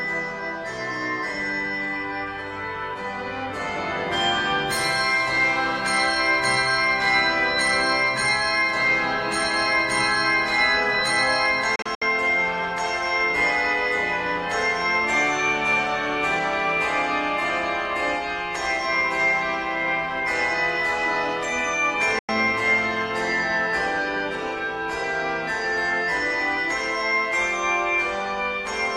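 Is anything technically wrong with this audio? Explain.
Yes, there are two digital broadcast dropouts. The first runs from 11.76 to 12.02 s and breaks into several short holes, totalling 128 ms of silence, the longest 64 ms. The second, at 22.19 to 22.29 s, is a single gap of about 96 ms. Corrupted or missing frames made the receiver mute until clean data returned. Each cut fades out in about 3 ms, and the hole lengths point to frames of roughly 32 ms being discarded. The programme sent during the gaps is lost.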